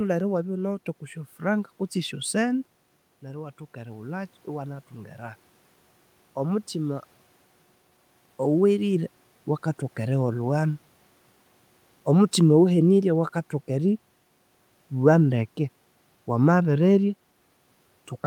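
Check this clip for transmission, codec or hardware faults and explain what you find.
One fault is audible. From 3.2 to 5.47 s, automatic gain rising: after the speech level dropped by about 11 dB, the AGC gradually added about 5 dB, swelling voice and room noise together.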